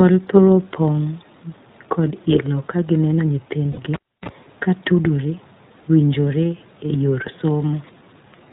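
The whole clip of speech has passed through the iLBC codec, a narrowband VoIP coder that treats each short frame on its own. The band stops at 4 kHz, so the speech sounds boxed-in and thin, and the damage is plainly audible as a rough, slightly synthetic edge on every syllable. The frame handling points to 20 ms frames and fits the 15.2 kbps mode.

From 3.72 to 3.79 s, packets carrying about 60 ms of audio were lost, consistent with three consecutive frames, and lost iLBC frames were filled in by the decoder. It looped the last pitch period with added noise, so the gap comes out as a short, held, faintly buzzy vowel instead of silence. Because each frame decodes independently, the sound snaps back to normal as soon as real frames arrive.

At 3.94 s the cable is pulled and plugged in: a live lead is yanked out and reinserted, ending at 4.29 s. A pop marks the disconnection, followed by roughly 0.3 s of near silence. 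As the plug goes back in, only the tip makes contact at first, which lets through a burst of 60 Hz mains buzz lasting about 36 ms. A second pop follows as the full connection restores the signal.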